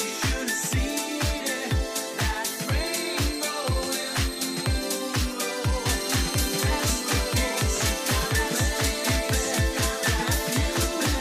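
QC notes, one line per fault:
5.86 s to end: doubled audio track. A second full-band copy of the sound enters abruptly, trailing about one and a half seconds behind and at roughly the same level. It has no decay or room colour. A slower second capture path is the likely cause.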